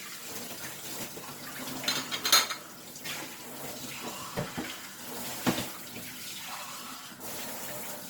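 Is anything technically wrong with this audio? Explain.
Yes: throughout, Opus compression, likely a low-rate CELT encode near 24 kbps, makes the sound grainy and rough. The spectrogram shows noise-filled bands to 20.2 kHz, without clean holes.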